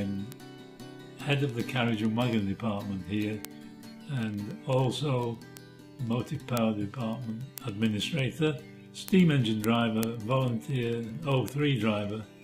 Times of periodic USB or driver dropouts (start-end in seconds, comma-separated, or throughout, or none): none